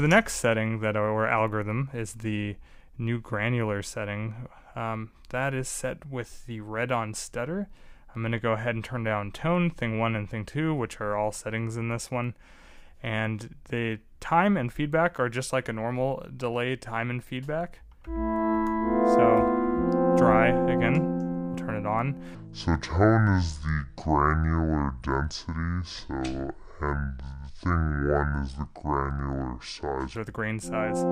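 From 22.35 s to 30.15 s comes a section at the wrong speed, running at 0.621 times normal, likely from being clocked wrongly on playback. Pitch drops about seven semitones and the sound turns deep and sluggish. A spectrogram shows all bands shifted down and stretched in time.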